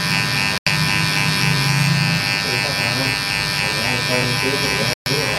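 Two Bluetooth dropouts cut the audio, at 0.58 to 0.68 s and at 4.93 to 5.07 s, leaving holes of roughly 0.10 s and 0.14 s. The sound stops abruptly and returns further along, as if it had kept playing through the gap. That pattern points most likely to wireless packets arriving too late at the headphones and being discarded, so the output fell silent until valid data resumed.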